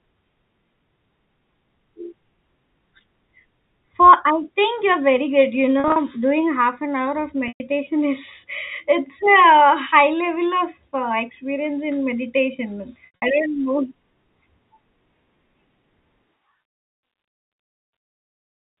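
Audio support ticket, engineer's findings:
Packet loss with pitch repetition, three events. Receiver concealment repeating last pitch period across gaps.

5.80 to 5.96 s: about 100 ms lost, scattered over 160 ms, longest run 40 ms. Brief held, buzzy patches.

7.48 to 7.60 s: 120 ms continuous gap. Repeated period fades toward silence, short cross-fade back into speech.

13.06 to 13.22 s: 140 ms lost over 160 ms, longest run 80 ms. Audible fade-out, then return. G.711 telephone band heard throughout.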